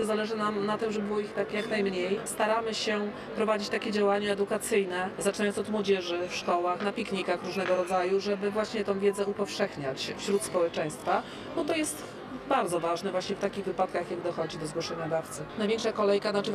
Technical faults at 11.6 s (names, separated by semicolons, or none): channel delay (comb filtering)